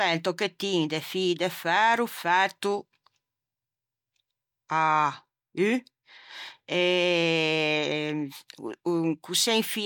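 No technical faults can be heard anywhere in the speech, so there are none to describe in time order.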